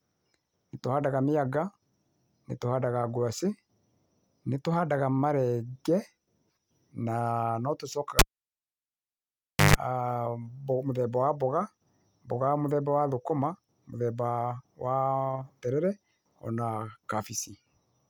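Speech, with a cable pulled and plugged in from 8.19 to 9.76 s. A pop opens about 1.5 s of near silence. Then comes a 146 ms burst of 50 Hz mains buzz and a second pop.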